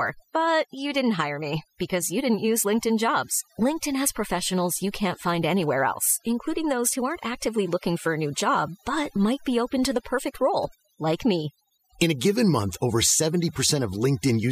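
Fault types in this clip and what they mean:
overdone noise removal: Someone ran a noise reduction pass far too hard on this speech. The processor kills individual frequency bands any time they dip close to what it thinks the noise floor is, so the softer bits of the voice get cut along with the noise. Between phrases the background drops and breaks up into little twinkling specks.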